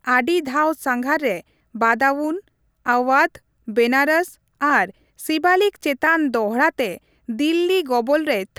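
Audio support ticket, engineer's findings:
Listened through the speech recording and nothing stood out as a fault needing follow-up.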